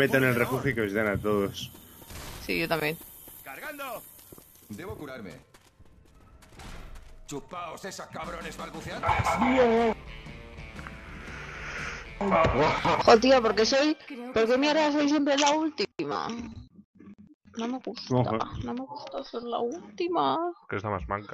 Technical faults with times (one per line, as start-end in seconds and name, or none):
7.83 damaged data in a compressed stream
12.94 damaged data in a compressed stream
19.42 damaged data in a compressed stream